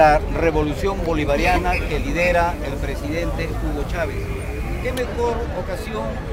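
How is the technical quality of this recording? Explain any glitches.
The recording has one clear technical fault. From 1.28 s to 4.95 s there is video or display buzz: a screen or video cable couples interference into the audio path, producing a harsh 60 Hz field-rate buzz with hash above it, sitting roughly 15 dB below the wanted sound.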